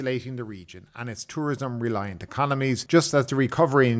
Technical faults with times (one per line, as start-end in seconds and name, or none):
0.94-3.87 automatic gain rising